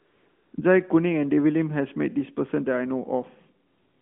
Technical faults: AMR comfort noise

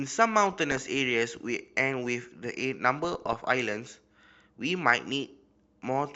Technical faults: MP2 compression; DAB burbling

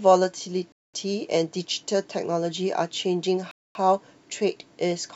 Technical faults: Bluetooth stall

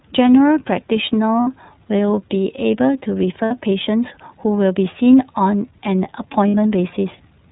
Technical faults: iLBC codec; lost iLBC frames

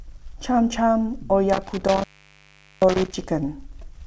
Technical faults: intermittent contact

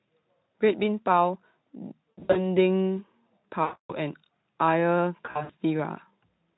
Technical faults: VoIP packet loss concealed by the speech codec

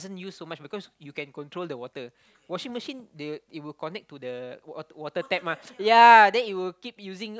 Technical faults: none

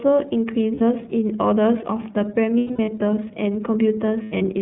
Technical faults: iLBC codec; lost iLBC frames

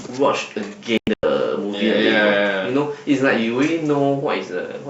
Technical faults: digital broadcast dropout

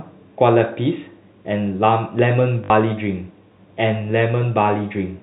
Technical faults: loud pop; packet loss with last packet repeated

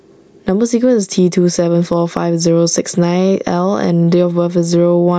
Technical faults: gain pumping

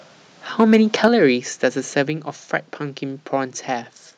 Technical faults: microphone overload; microphone volume stepped down

